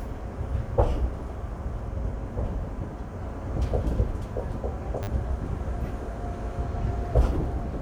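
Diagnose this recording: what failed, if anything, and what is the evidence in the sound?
A repeated buffer at the driver/buffer stage, 5.03–5.07 s: a brief buzz as one slice, which fits a 10 ms buffer, replays four times, skipping around 40 ms. Unlike a dropout, there's no silent gap.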